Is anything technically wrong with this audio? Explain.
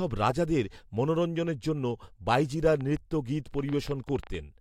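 Yes. A train of clicks runs from 2.81 to 4.35 s. Short pulses of much the same shape land at an uneven pace, about 7.8 per second, giving roughly fifteen clicks over that stretch. Their peaks come up to about the level of the speech itself. This is likely interference from nearby equipment or a faulty connection or power supply, each injecting a brief spike. It is heard as irregular ticking or popping laid over the speech and through its pauses.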